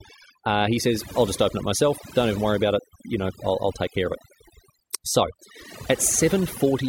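Overdone noise removal runs through the whole clip, from the first moment to the last. A noise reduction stage was pushed far too hard: any frequency band whose level sat close to its noise estimate was pulled down or shut off, and the softer parts of the speech went with the noise. Between phrases the background drops to near silence broken by twinkling specks.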